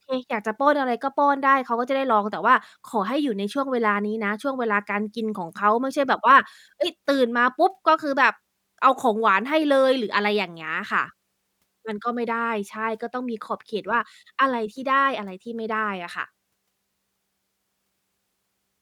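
No technical faults are audible anywhere in this speech recording.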